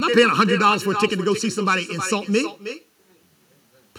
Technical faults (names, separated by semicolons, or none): channel delay (comb filtering); echo with no canceller